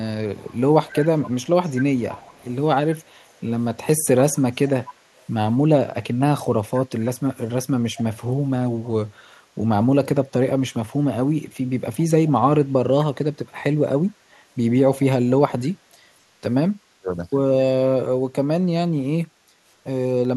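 From 0.36 to 2.55 s, then 3.21 to 3.41 s, 4.35 to 5.23 s, 6.75 to 7.09 s, at 8.0 s and from 11.97 to 12.31 s, an echo leak trails the speech by 248 ms, roughly 20 to 40 dB down, likely from a loudspeaker echo canceller letting it through. A spectrogram shows faint, delayed copies of the speech harmonics.

From 16.76 to 17.1 s, speech suppressed in double talk turns the speech down, dropping roughly 35 dB, likely as the canceller ducks both sides. The waveform shows sudden notches.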